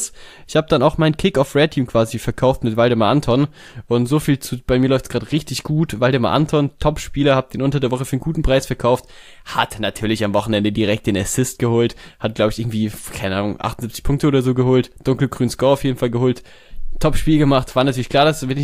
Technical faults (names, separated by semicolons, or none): none